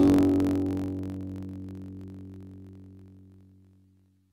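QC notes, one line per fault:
Throughout: planar audio read as interleaved. Each 21.77 ms block of left-then-right samples plays as two double-speed halves, raising pitch an octave (12 semitones) with a 45.9 Hz buzz. The spectrogram shows harmonics doubled, with vertical striping every 21.77 ms.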